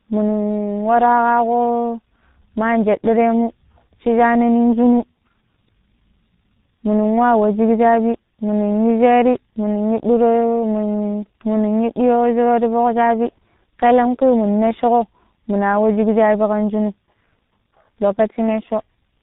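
Tandem speech coding runs throughout: the speech was decoded and re-encoded across three codecs, likely ending in low-rate G.723.1, leaving it rough, warbly and muffled, with nothing above 3.8 kHz.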